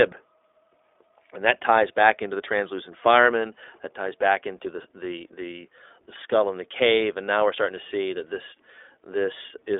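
Speech runs through the iLBC codec for its whole length, with nothing above 3.8 kHz and a 300 Hz to 3.6 kHz line band. Each frame's excitation is coded independently, leaving a plainly audible rough, synthetic edge consistent with 20 ms frames at 15.2 kbps.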